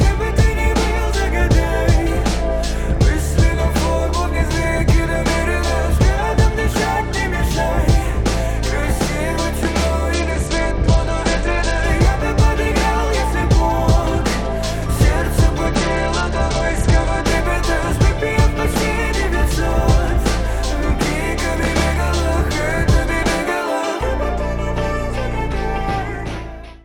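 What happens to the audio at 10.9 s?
Link congestion causes a Bluetooth SBC bit pool drop from 10.14 to 11.84 s, consistent with about 84 kbps: starved upper sub-bands dull the treble, and coarse quantisation adds gritty noise.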